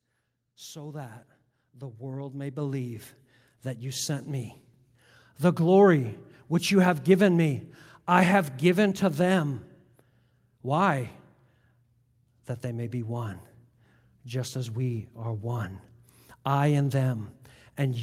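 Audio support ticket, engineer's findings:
Automatic gain rising, 0.42–5.91 s (about 15 dB, ending before "which you have given") and 12.3–15.72 s (about 4 dB). AGC lifting gain on quiet input; voice and background swell together.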